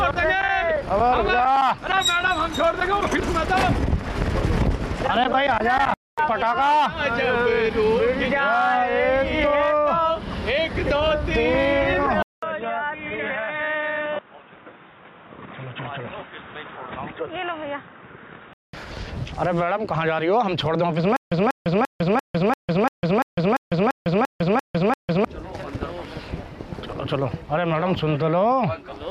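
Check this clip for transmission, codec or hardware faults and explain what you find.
Two faults stand out.

From 12.2 to 18.7 s, after a 0.2 s silence, the sound turns boxy, cut off above 3.8 kHz, about 5 dB quieter, with new background hiss. This is likely an input switched to a poorer device; simple filtering wouldn't add noise.

From 21.16 to 25.25 s, a 192 ms burst repeats every 343 ms, with 151 ms of digital silence between. This is a stutter with silent gaps, likely a stalled stream. Unlike a dropout, the same fragment returns.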